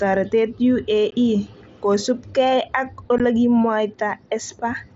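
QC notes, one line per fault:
1.11 s and 3.18 s (just after "kosupkei ak"): unconcealed Bluetooth headset packet loss. The sound drops out for about 15 ms each time, which fits two lost headset frames. Nothing fills the gaps. They have hard edges, heard through the wideband mSBC path.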